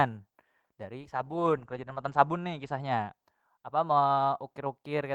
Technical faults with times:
0.98-3.73 call bitrate drop

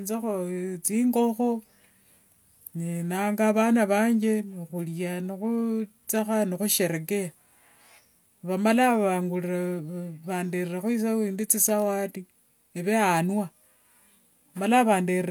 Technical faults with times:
none

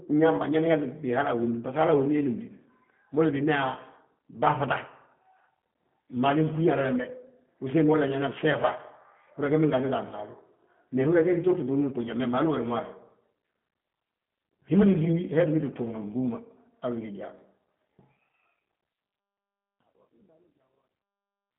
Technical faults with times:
0.00-21.58 G.729 codec

